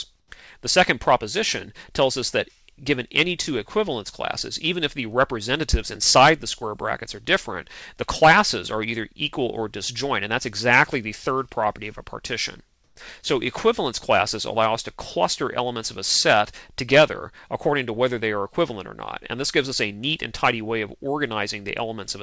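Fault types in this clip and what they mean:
Comfort noise in place of the background: two 120 ms stretches where the faint background turns to flat hiss, first about 5 dB quieter, then about 5 dB louder, likely from discontinuous transmission.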